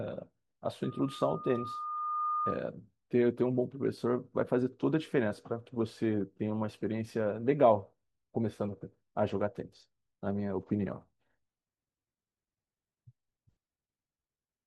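It's a speech clip, and the problem is a loudspeaker feedback squeal from about 0.83 s to 2.65 s. A single tone at 1.2 kHz swells up over roughly a second and a half until it's sitting at about the same level as the speech. That's the mic hearing its own loudspeaker: around 1.2 kHz the loop gain went past one, so that frequency kept feeding itself.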